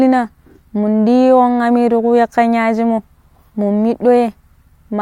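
No technical faults can be heard in this recording.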